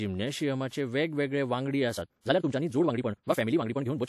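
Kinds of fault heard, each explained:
Time-stretched section: Right after "वेगवेगळे वांगडी", at about 1.93 s, the pace jumps to roughly twice as fast and stays that way to the end, while the pitch doesn't rise with it. That combination points to a likely cause: software squeezing this stretch to fit a shorter length, keeping the pitch steady by cutting out short pieces of the sound. The result is an abrupt, rushed delivery.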